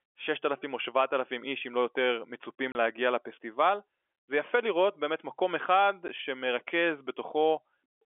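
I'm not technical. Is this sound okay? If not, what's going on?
No. The speech briefly cuts out twice: a 30 ms hole at 2.72 s, right after "איש אם לא יותר", and a 10 ms hole at 6.08 s, after "לראות באמת מקום אחד". This is packet loss filled with silence. Small chunks of the audio went missing on the way, and the receiving end played silence in their place. The narrow, phone-line tone comes from ordinary G.711 telephone coding.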